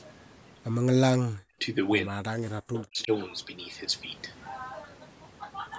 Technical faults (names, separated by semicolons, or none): speech suppressed in double talk